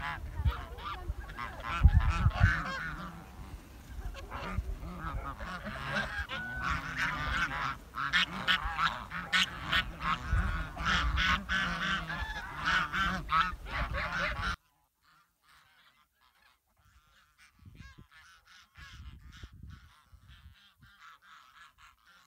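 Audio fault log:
14.54–22.27 s, one channel inverted: when summed to mono, the centred material nearly vanishes and the level drops by about 34 dB, leaving only a faint residue. The likely cause is one stereo channel flipping polarity, so everything common to both cancels.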